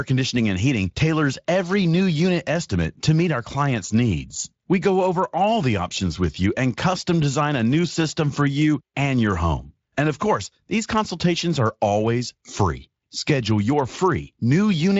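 No technical faults can be heard in this speech clip. It has passed through the Speex codec, which leaves only light coding damage and no content above about 7.6 kHz.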